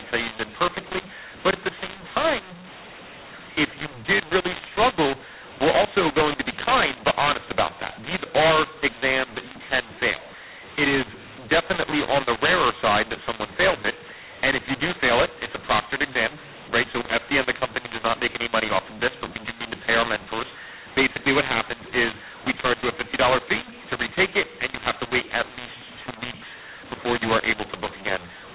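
From start to finish, the speech suffers from mu-law and A-law mixed up. The telephone stream was encoded with mu-law G.711 but decoded as A-law, so each 8-bit code word maps to the wrong level. Loud and soft samples are scrambled, some too large and others too small, giving a harsh, distorted voice. The quietest codes are lifted well above silence, so pauses fill with noise. The band stays capped below 4 kHz.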